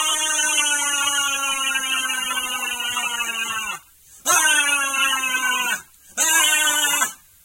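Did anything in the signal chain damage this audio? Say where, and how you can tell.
No, nothing damaged it.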